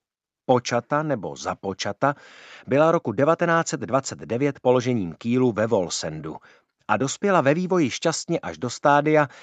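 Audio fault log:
No faults detected.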